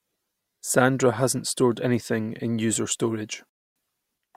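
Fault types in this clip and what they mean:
Rebuffering stall: the speech halts abruptly at 3.49 s, sits in silence until 3.76 s, then carries on from exactly the point where it stopped. This is the player running dry of downloaded audio and waiting for more data, so about 0.26 s of dead air is inserted into the timeline. What separates it from a dropout or packet loss is that no audio goes missing: nothing is skipped, and the speech simply arrives later.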